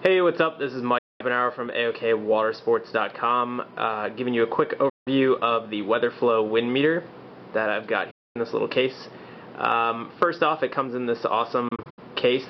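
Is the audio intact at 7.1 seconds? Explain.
Yes, the audio is intact at 7.1 seconds, with no audible fault at that moment.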